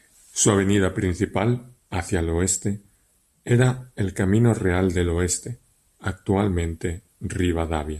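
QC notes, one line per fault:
No faults heard anywhere in this speech recording.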